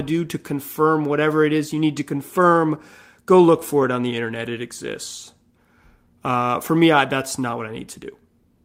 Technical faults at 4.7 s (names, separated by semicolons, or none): none